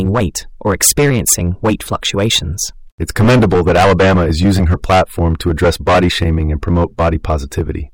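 Speech with hard clipping throughout: driven about 15 dB past full scale, around a tenth of the samples are cut flat, adding harsh fuzz to every loud syllable.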